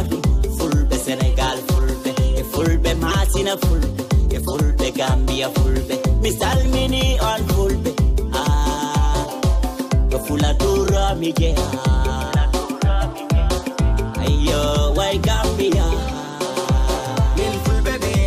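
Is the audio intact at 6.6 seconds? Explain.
Yes, the audio is intact at 6.6 seconds, with no dropout, click, distortion or other fault at that point.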